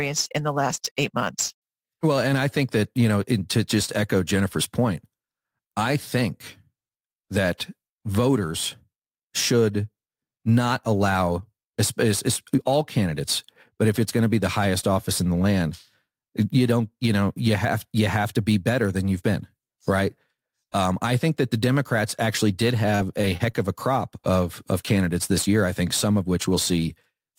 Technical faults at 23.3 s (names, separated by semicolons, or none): sample clock jitter; repeated packet loss (robotic sound)